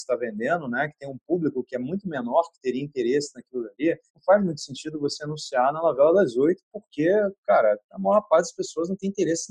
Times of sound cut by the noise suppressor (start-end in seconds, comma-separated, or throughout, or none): 0.12-1.32, 1.58-1.78, 2.07-2.28, 3.35-4.20, 6.56-6.95